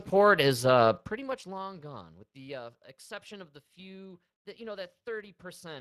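Speex codec damage runs throughout the speech, from start to finish. Speex is a CELP coder that rebuilds speech from a predicted spectral envelope plus a coded excitation signal. Here the excitation is coded too coarsely to hold the fine detail, so the speech comes out plainly hoarse and grainy, with a noisy texture. The amount of damage fits a bitrate of roughly 22 kbps.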